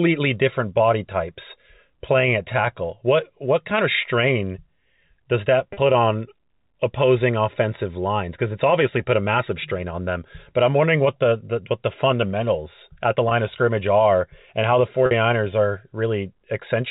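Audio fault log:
5.73 s, 13.29 s and 15.06 s: packet loss with pitch repetition. Gaps of 40 ms, 20 ms and 50 ms in the speech were bridged by repeating the last pitch cycle, consistent with 10 ms packets being lost. Each sounds like a brief held, buzzy tone rather than a hard click or silent dropout. The 50 ms gap begins to fade before the speech cross-fades back in. The G.711 telephone band around the gaps stays intact.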